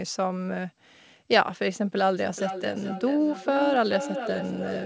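From 2.17 s to the end, the speech comes back as a delayed repeat roughly every 0.4 s, peaking about 7 dB below the direct speech. This is feedback echo between two devices: one device replays another's audio, whose microphone recaptures it, and neither echo canceller removes it.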